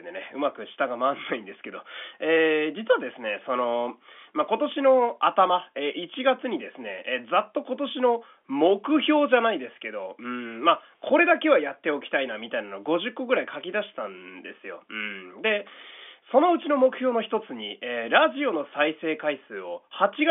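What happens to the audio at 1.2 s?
Nothing goes wrong at 1.2 s: the speech passes intact through its telephone-band G.711 coding, with no fault at that moment.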